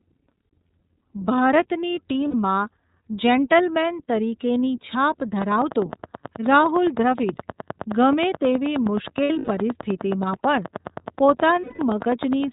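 The whole clip is speech squeezed through the iLBC codec. Everything above 4 kHz is gone, and the voice has that clear but slightly rough, synthetic edge that iLBC gives. The damage is plainly audible. The 30 ms framing fits iLBC's 13.33 kbps mode, where each frame's excitation is coded on its own without borrowing from the one before.

The first lost iLBC frames come at 2.29 s, a gap of about 60 ms, which fits two missing frames. The decoder fills the hole by repeating the last pitch cycle with some noise mixed in, so you hear a short held, slightly buzzy vowel. Then the voice snaps straight back.

Right after "જેન્ટલમેન તરીકેની છાપ", at 5.42 s, a train of clicks starts and runs to 12.45 s. It's a steady tick at about 9.5 per second, roughly seventy clicks in all, each much the same shape and peaking around 10 dB above the speech. You can hear them through the pauses too. The likely source is interference from nearby gear or a faulty connection or power supply.

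More iLBC losses land under those clicks. From 9.24 to 9.49 s, about 180 ms goes missing, scattered across 240 ms with the longest run near 100 ms. That gives a choppy patch of buzzy held vowels that fades during the longer stretch. At 11.61 s there's a solid 180 ms dropout that stays buzzy and fades before the speech recovers almost immediately.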